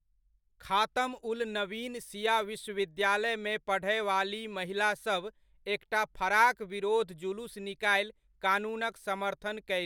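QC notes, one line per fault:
No audible faults detected.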